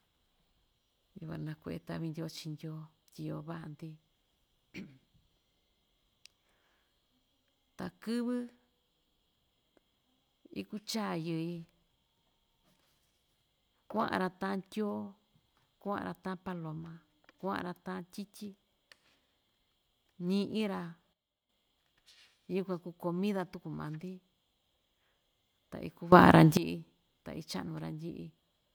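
At 21.13 s the level of the speech and its background noise drops together by about 12 dB and stays down until 21.49 s. At 26.12 s both rise abruptly by about 18 dB, holding until 26.57 s. Each is a sudden gain jump, with no fade in or out. The likely cause is a digital gain value being applied from one sample to the next without a ramp, so the whole signal steps at once rather than the speech itself changing.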